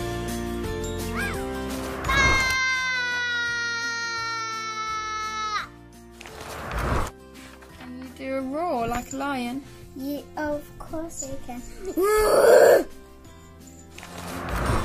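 Compressed frames skipped at 11.87 to 11.89 s: a couple of frames of the encoded stream never reach the output, so the audio lurches forward by roughly a tenth of a second, about two 46.4 ms frames.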